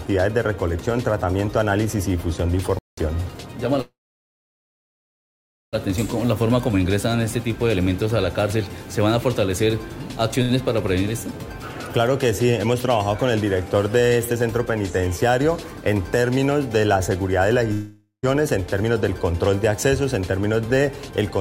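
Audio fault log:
2.79–2.97 s, playback stall: the sound stops dead for about 188 ms and then resumes. The gap is plain silence with no buzz or fading tail, which separates it from a network freeze. A starved or blocked player is the likely cause.
3.81–5.75 s, call audio freeze: the last sound is carried on as a fading buzz, and then about 1.8 s of silence follows. The audio picks up from the same point with nothing lost, adding about 1.9 s of delay. This likely comes from held-up packets emptying the jitter buffer.
10.42–10.51 s, short stall from a late packet: one sound is drawn out for about 72 ms with a faint buzz and then carries on from the same place. Nothing is lost. The event is too brief to fall silent, unlike the freeze at 3.81 s.
13.18–16.46 s and 18.67–19.47 s, jitter buffer speed-up: the receiver trims pitch-period pieces repeatedly to shrink its backlog. The audio runs hurried at the same pitch, at 109% in the first stretch (roughly 0.3 s removed) and 106% in the second (about 50 ms). 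There are no gaps, only a quicker pace.
17.73–18.25 s, long network dropout: a fading buzz thins into about 120 ms of silence, about 0.5 s filled in all. When the audio returns, about 520 ms of it is missing. Unlike the freeze, the sound comes back further on rather than where it stopped. Lost packets are the likely cause.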